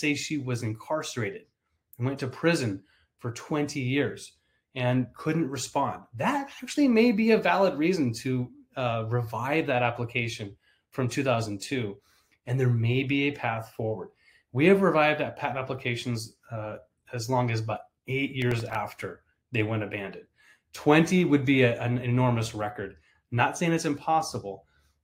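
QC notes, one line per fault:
18.42 to 18.75 s, processor overload crackle: a short burst of gritty tearing rides on top of the sound for about a third of a second, then stops cleanly. The processor fell behind its deadlines in a quick run. Each time it missed one, a stale slice of earlier audio was replayed in place of new material, leaving hard edges. About seven such misses on buffers of under a millisecond each run together into this crackle.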